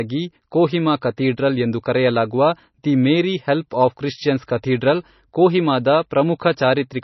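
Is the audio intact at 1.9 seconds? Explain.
No. At 1.9 seconds, as across the whole clip, the speech carries MP3 compression damage, likely from encoding at a very low bitrate, around 24 kbps. Starved of bits, the encoder discarded everything above 5.9 kHz and dropped quieter frequency lines that flicker in and out between frames. The result is heavy: a dull, band-limited sound with a watery, swirling texture, metallic chirping on s sounds, and consonant attacks smeared rather than crisp.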